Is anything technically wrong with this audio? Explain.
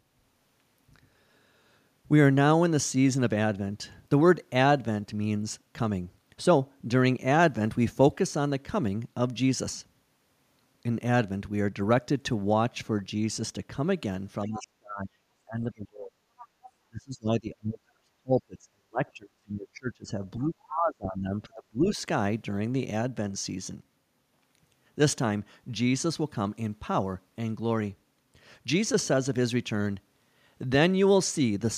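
Yes. Between about 14.5 and 22.0 s the speech runs into echo-canceller trouble while the far side is talking.

Speech suppressed in double talk appears from 14.47 to 16.16 s, 16.9 to 20.12 s and 20.37 to 22.01 s. The talker's voice sinks by roughly 35 dB at its deepest in the first two spans and about 25 dB in the third, for around 1.5 s, 3 s and 1.5 s of affected speech. The likely cause is an echo canceller that could not tell the near talker from loudspeaker echo and pulled everything down together. Unlike a level drop from distance or a fading connection, the dips follow the far side's activity.

The other side's voice leaking through appears in two brief scraps at 16.38 to 16.45 s and 16.62 to 16.71 s, roughly 25 dB below the talker's speech. This is likely residual loudspeaker sound the canceller failed to subtract from the microphone. It differs from crosstalk or a second person in the room because it is faint and clipped to fragments under a tenth of a second.

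Background gated by the echo canceller happens between those two scraps, from 16.45 to 16.62 s. The room sound drops by about 10 dB for around 150 ms and then returns. The canceller clamped the microphone while the loudspeaker was active. What separates this from speech suppression is that the ambience itself dips briefly in a short hole between leaked fragments.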